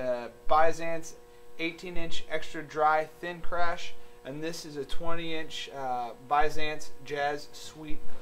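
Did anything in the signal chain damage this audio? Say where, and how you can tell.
No, nothing along the chain audibly damaged this audio.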